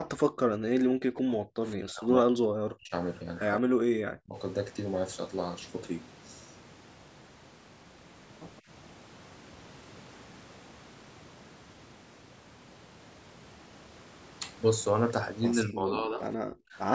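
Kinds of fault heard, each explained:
Speech suppressed in double talk, at 0.57 to 0.82 s, 1.02 to 2.92 s, 3.61 to 4.36 s and 15.68 to 16.77 s: the talker's level collapses in patches, by roughly 40 dB at the deepest, so stretches of speech fade or break into fragments, with most of the long 1.02 to 2.92 s span affected. The cause is likely an echo canceller that, with both ends talking at once, could not tell this talker from loudspeaker echo and turned both down.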